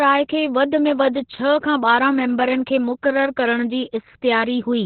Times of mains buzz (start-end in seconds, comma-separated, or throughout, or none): none